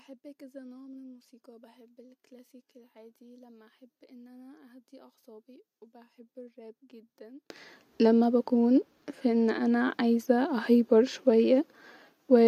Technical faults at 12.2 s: none

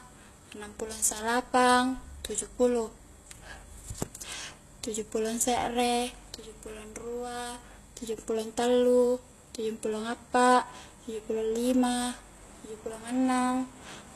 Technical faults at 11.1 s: HE-AAC compression

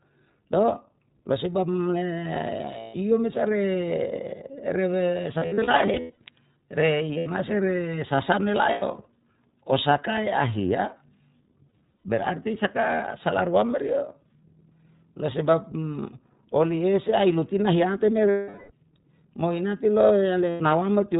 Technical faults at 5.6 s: iLBC codec; lost iLBC frames

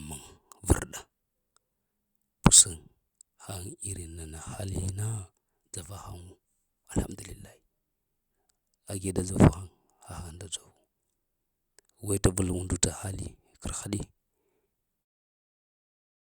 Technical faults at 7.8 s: none

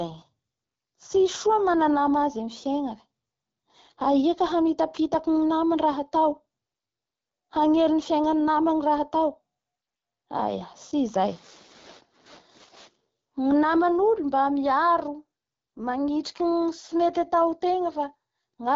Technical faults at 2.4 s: AMR wideband (HD Voice) codec

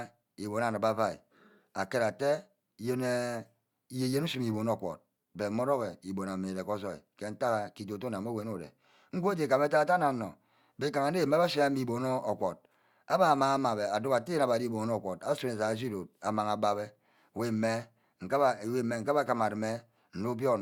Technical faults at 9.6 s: none

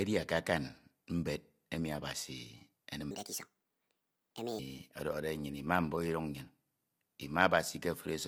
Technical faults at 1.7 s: low-delay AAC compression

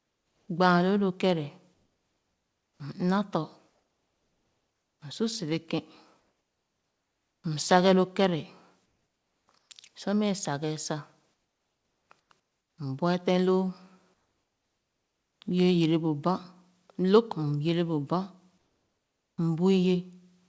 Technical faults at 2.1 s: comfort noise in place of the background

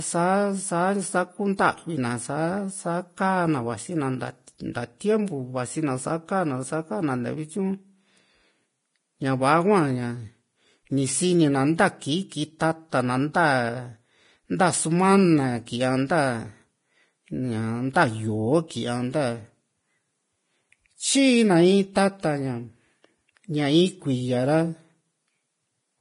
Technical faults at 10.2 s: Vorbis compression

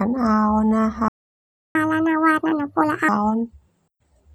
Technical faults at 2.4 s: catch-up at higher speed

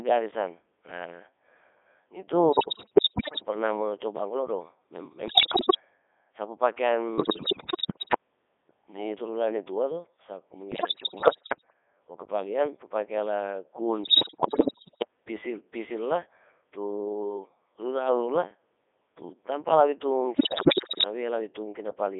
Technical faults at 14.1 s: Codec 2 vocoder; bit errors on digital voice radio

